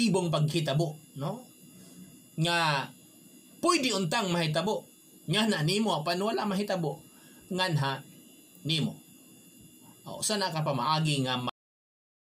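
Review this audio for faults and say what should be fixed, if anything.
Cut-off end at 11.49 s: the final buffers were never written, so the sound stops mid-event and drops straight to digital silence without decay. Flush and close the writer only after the last buffer has been fully committed.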